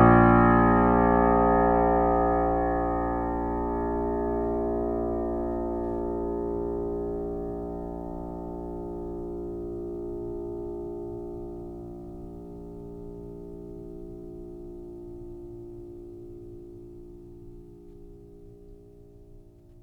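No technical faults are audible.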